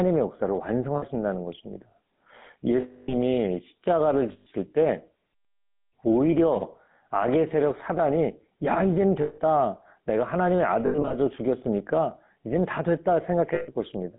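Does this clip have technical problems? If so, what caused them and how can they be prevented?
Yes. Throughout, the speech sounds buzzy, gravelly and thin, squeezed into roughly 150 Hz to 3.7 kHz. This is the GSM full-rate codec, which fits a 13 kbps phone path. It rebuilds the voice from a vocal-tract model driven by sparse, evenly spaced pulses. A wideband codec such as AMR-WB, or a higher-quality channel, would avoid it.

At 0.96–1.04, 2.8–3.14, 4.32–4.47, 9.22–9.40, 10.86–11.14 and 13.54–13.69 s, the sound freezes into a rough, metallic ring. It is longest at 2.8 s, about 280 ms, and broken into short bursts around 10.9 s. These are lost GSM frames: the decoder fills each gap by repeating the last good frame at falling level. A stronger radio link or better error protection would prevent them.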